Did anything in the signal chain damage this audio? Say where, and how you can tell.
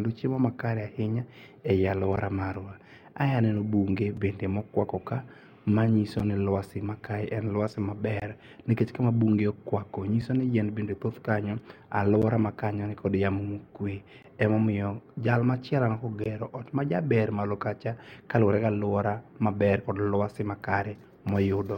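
Yes. This speech has gaps between stream segments, a fault in the network streaming and playback stage. Short, hard-edged silences land at 2.16, 4.17, 6.19, 8.20, 10.22, 12.22, 14.23 and 16.24 s. The one at 16.24 s falls between "jal machielo" and "majaber malo kacha kaluore". They recur every 2 s and last 4.5 to 19.8 ms. That spacing matches 2-second segments. Their timestamps leave small holes, and the player fills each hole with silence. No audio is lost.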